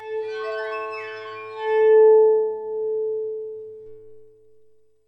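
From start to finish there's channel delay, so you get comb filtering. One side arrives roughly 3 ms behind the other, and when the two get folded down to mono, whatever they share cancels at regularly spaced frequencies. The first notch sits somewhere around 200 Hz and the rest repeat up the spectrum, every few hundred hertz. That's why the whole thing sounds hollow and a bit phasey, with a scooped-out colour that never shifts.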